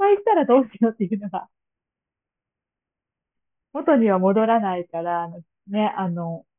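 Aliasing runs through the whole clip, from start to finish. The speech was brought down to a much lower sample rate without a low-pass filter first, which fits a drop to about 6 kHz, so everything above the 3 kHz fold point has been mirrored back below it. Those folded components sit roughly 25 dB under the speech and bear no harmonic relation to it, so sibilants and breathy consonants come out gritty and metallic, with the top of the band crowded right up to 3 kHz.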